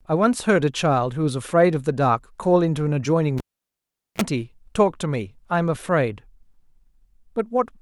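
Cable pulled and plugged in, 3.38 to 4.22 s: the live lead is yanked out with a pop, leaving about 0.79 s of near silence, then a 35 ms burst of 60 Hz mains buzz as only the tip makes contact, before a second pop restores the sound.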